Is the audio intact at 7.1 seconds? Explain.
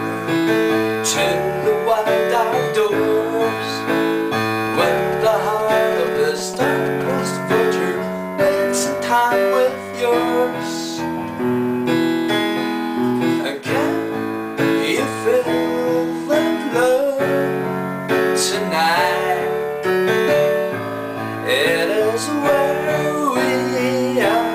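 No. A galloping dit-dit-dit of short 217 Hz buzzes runs from 4.67 to 7.11 s at roughly 10 dB below the sound. These are GSM signalling bursts: a nearby 2G phone's intermittent radio bursts are rectified by the audio circuit. Right after, from 7.19 to 8.23 s, a steady, raspy 217 Hz buzz with many harmonics sits about 23 dB below the sound. This GSM phone buzz comes from a nearby 2G phone transmitting in bursts 217 times a second during a call.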